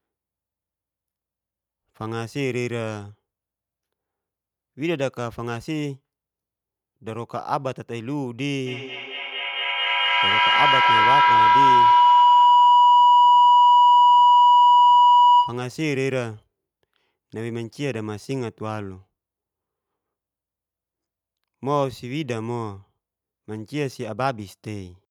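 A speech recording with feedback howl from 8.66 s to 15.74 s. A tone near 1 kHz swells until it sits about 10 dB above the speech. It pulses roughly every fifth of a second. That pulse matches the loop delay. Two devices on the same call share a room. Each trip from microphone to loudspeaker and back adds gain. The repeats grow instead of dying out, and narrow onto the pitch the loop favours.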